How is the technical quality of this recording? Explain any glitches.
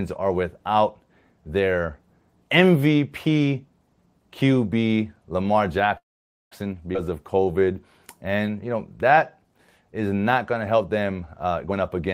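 The recording has several network-style playback glitches clustered in its second half: a freeze, a forward skip, two slowed stretches and a hurried ending.

Call audio freeze, 5.97 to 6.53 s: the speech halts and about 540 ms of gap is inserted. Only a brief tail carries on before roughly 510 ms of silence. This is likely a receiver whose jitter buffer ran dry while packets were delayed. It extended the last sound briefly, then went quiet until data resumed. Nothing is lost, but the speech is pushed later.

Skip ahead, 6.93 to 6.97 s: right after the freeze, playback jumps forward. Around 150 ms of speech is missing, and the two sides are spliced with only an 11 ms bridge, so the audio sounds abruptly clipped. A stretch of audio was dropped, on the way or by an overflowing jitter buffer, while later audio was already waiting, which took back some of the delay the stall had built up, trading content for latency.

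Jitter buffer slow-down, 7.05 to 7.74 s and 8.18 to 8.47 s, the second ending just before "you know that is": the speech runs at 88% and then 86% speed with unchanged pitch. Sounds are audibly drawn out, with 93 ms and 50 ms added. The receiver was rebuilding its reserve by repeating individual pitch periods many times in succession.

Jitter buffer speed-up, from 11.22 s to the end, just after "not going to help": delivery jumps to 127% speed at the same pitch and sounds rushed. Roughly 300 ms is cut out. Here the buffer held more than its target, so the receiver trimmed short pitch-period-length pieces repeatedly to bring the delay back down.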